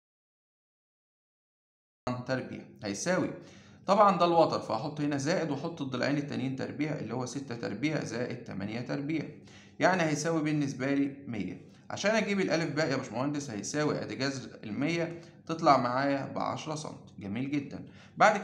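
The clip opens in an audio dropout to silence. From the first instant until 2.07 s there is dead silence, with no room tone at all. The sound then enters mid-flow. The input was likely lost, and silence was written in its place.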